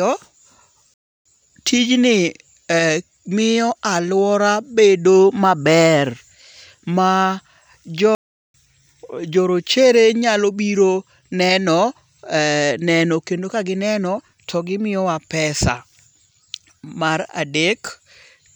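Playback stalls at 0.94–1.25 s and 8.15–8.54 s cut the speech to silence for about 0.32 s and 0.39 s, likely from the player's buffer running dry before output resumes.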